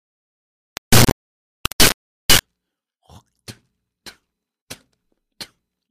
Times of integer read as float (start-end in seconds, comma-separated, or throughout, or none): 0.00-2.40